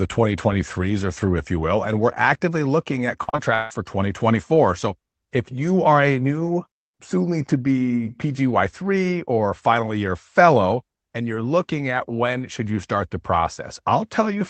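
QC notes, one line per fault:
3.23–3.72 s, repeated packet loss (robotic sound): four dropouts land close together, with the longest hole about 0.16 s. The receiver fills each by stretching the last received sound forward, so roughly half of this half-second is synthetic continuation and the rest is simply missing. Back-to-back concealment gives the choppy, robotic texture. Through the call path, the top end stops near 8 kHz, which fits an Opus wideband setting.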